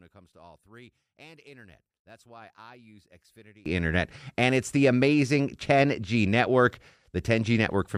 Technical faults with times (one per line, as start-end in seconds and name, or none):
0.00-3.66 one channel inverted